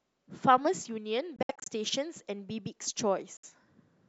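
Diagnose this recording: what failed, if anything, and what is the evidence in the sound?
Speech cuts out in gaps at 1.36–1.68 s and 3.37–3.45 s, then resumes as if it played on: likely a Bluetooth dropout at playback, not a buffer stall.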